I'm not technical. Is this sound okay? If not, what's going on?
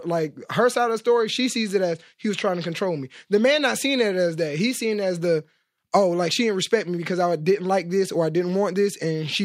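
Yes, the recording comes across as technically sound, with nothing going wrong in the signal at any point.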